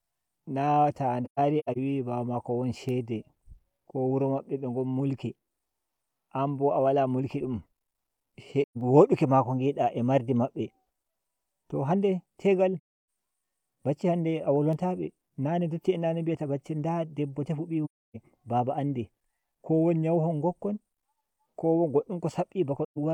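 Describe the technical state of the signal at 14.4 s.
At 14.4 s the speech signal is intact, with no dropout, clipping, glitch or other technical fault at that point.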